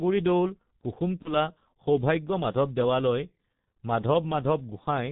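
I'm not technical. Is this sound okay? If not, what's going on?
No. Throughout the clip the speech sounds muffled and hoarse, as if heard through a cheap phone line, and consonants come out smeared. That's the G.723.1 codec, an early internet-telephony format that squeezes speech very hard. It throws away everything above 4 kHz, where much of the crispness lives, and it rebuilds the voice from a rough model that updates only in 30 ms steps, so fine detail blurs.

From about 1.22 to 1.35 s there's a brief moment where the voice is stretched into a fading buzz or noise, then recovers. This is VoIP packet loss concealed by the speech codec. A piece of the call, about 30 ms worth and likely a single lost packet, never arrived. The decoder filled the gap by stretching the last sound it had, fading it out. Because each chunk of sound builds on the previous one, the voice stays weak or distorted for a while after the gap, which is why the glitch lasts longer than the missing piece itself.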